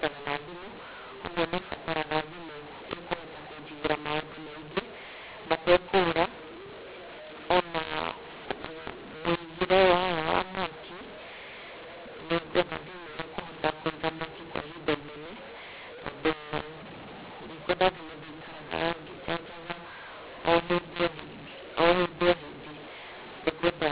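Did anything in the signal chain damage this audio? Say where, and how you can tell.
Yes: a mu-law and A-law mix-up at the G.711 decoder, throughout. A-law samples read as mu-law scramble levels, causing harsh distortion and noise-filled pauses.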